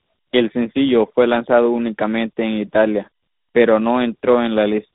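From start to end the speech carries tandem speech coding: it was decoded and re-encoded at link borders, so a second speech coder worked on the first one's output. Unlike a single low-rate codec, the roughness and warble are compounded, with nothing above 3.8 kHz.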